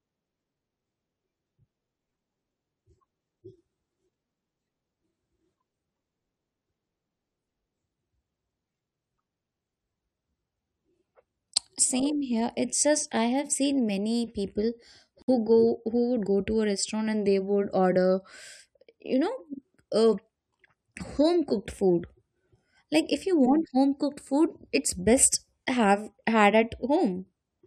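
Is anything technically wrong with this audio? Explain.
Yes. There is a gap at a join of encoded pieces from 15.22 to 15.28 s, right after "seen many people." Separately encoded segments were spliced untrimmed, so encoder padding leaves a 60 ms gap with smeared edges before the speech resumes.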